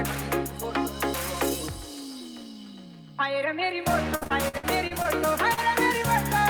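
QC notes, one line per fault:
4.15–5.06 s, repeated packet loss (robotic sound): choppy stretch where seven dropouts, the longest 58 ms, were patched by extending the preceding sound, covering 29% of the span.
5.54–5.59 s, short concealed packet loss: a brief smear where about 40 ms of audio went missing and the receiver filled it by continuing the last sound.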